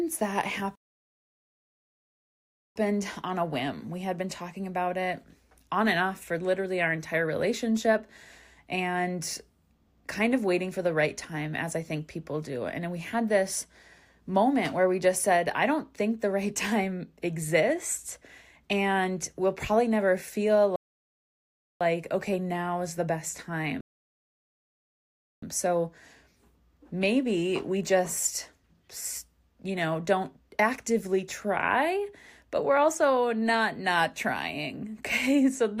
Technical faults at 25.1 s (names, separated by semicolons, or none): rebuffering stall